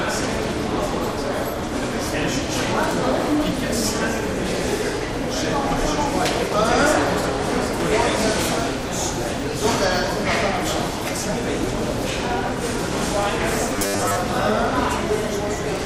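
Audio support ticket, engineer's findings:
Robotic sound from repeated short buffers, 13.76 to 14.16 s. Sound turns into a stiff metallic buzz pinned at 100 Hz, with most of that stretch made of repeats. Likely a starved playback buffer: audio arriving late, so the same 10 ms chunk gets looped while the real audio is skipped. The 10 ms loop is what sets the 100 Hz buzz.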